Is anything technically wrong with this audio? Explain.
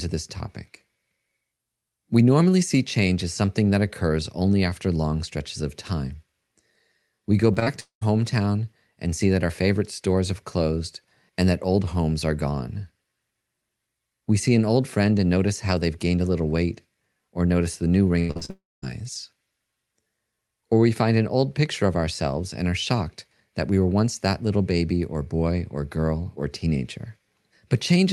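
Yes. The speech has packet-loss faults in two places, carried over a call codec path whose high frequencies stop at about 12 kHz.

Short concealed packet loss occurs at 7.53–7.58 s, 7.60–7.63 s and 7.63–7.68 s. Each time about 20 ms of audio failed to arrive in time. The decoder extended the preceding sound to cover the gap, so each event is heard as a brief smear or wobble.

A long network dropout follows at 7.80–8.03 s. The likely cause is that no packets arrived for about 220 ms. The gap is first filled with a fading continuation of the last sound, then with roughly a tenth of a second of silence before the speech returns with that part missing.

Repeated packet loss (robotic sound) runs from 18.19 to 18.50 s, just after "or notice the new". Four gaps, the longest 97 ms, leave about two-thirds of that span patched by extrapolation. The result is choppy speech with pieces missing.

A second long network dropout comes immediately after, at 18.50–18.84 s, likely from about 320 ms of lost audio. 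The concealment buzz or hiss fades into roughly 0.2 s of silence before the signal resumes.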